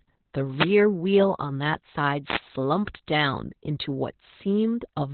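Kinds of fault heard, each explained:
Opus voice compression: muffled, hoarse, slightly robotic speech with nothing above about 4.3 kHz, from a narrowband SILK coder coarsely coding the excitation at a bitrate that sounds like 8 kbps.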